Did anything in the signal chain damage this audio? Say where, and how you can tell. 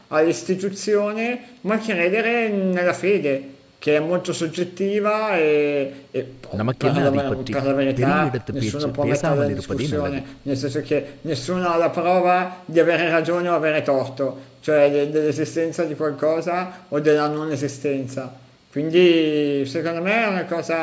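No, nothing in the chain damaged this speech; it carries the ordinary signature of call microphone processing, with the lowest bass trimmed by its high-pass filter and nothing above 8 kHz, which is normal behaviour for that stage.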